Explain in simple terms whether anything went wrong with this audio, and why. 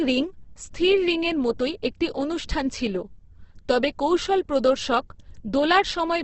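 Throughout the speech, the sound is rough and grainy, with nothing above about 8.2 kHz, so it feels dull. This is likely Opus compression squeezed hard: missing detail gets filled with noise, giving graininess instead of the watery swirl of MP3.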